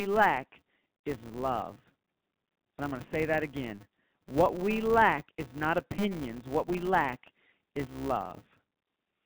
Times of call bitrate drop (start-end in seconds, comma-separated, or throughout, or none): none